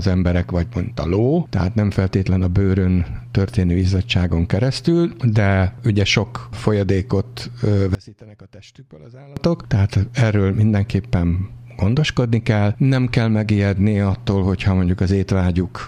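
One channel inverted, from 7.95 to 9.37 s: the sound suddenly drops by about 23 dB and turns faint, most likely because one stereo channel's polarity flipped, so the material common to both sides cancels when summed, leaving only their faint difference.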